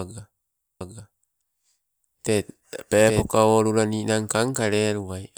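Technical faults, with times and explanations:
0.81–3.23 s, doubled audio track: a second full-band copy of the speech runs about 0.7 s behind at roughly equal level, dry and without room colour, starting and stopping abruptly and ending just before "olula ninang"; likely a slower second capture path mixed in.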